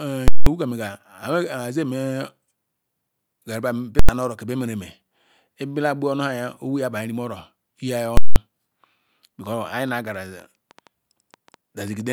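Right at the start, from 0.28 to 0.46 s, the speech hits invalid numbers at full scale. Some calculation blew up into infinite or invalid values, and the output got pinned at one extreme value for about 186 ms, which fits an 8192-sample block. You hear a huge pop going in and out with dead air between. The same thing happens at 3.99 to 4.09 s over a shorter 93 ms stretch (a 4096-sample block), and again at 8.17 to 8.36 s for 186 ms.

Then from 9.46 s to 12.11 s there's a train of clicks, about fifteen of them at around six per second, spaced unevenly. They're much the same shape each time and peak roughly as loud as the speech, so they tick over everything, pauses included. That's likely interference from nearby gear or a faulty connection or power supply.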